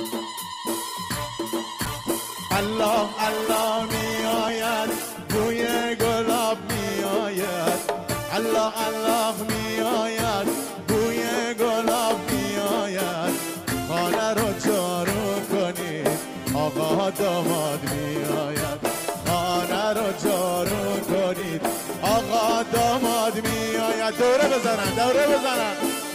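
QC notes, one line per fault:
1.86–5.99 s, call bitrate drop: the bandwidth estimate collapses and the encoder is starved of bits, with a fall from around 128 kbps to about 17 kbps. Its lowest rate holds for about 4.07 s. The coarser coding and lost high frequencies make the sound rough and muffled.
19.27–24.38 s, call bitrate drop: a milder fall, to about 25 kbps, holding its lowest rate for 2.8 s. The sound turns dull and grainy until the rate recovers.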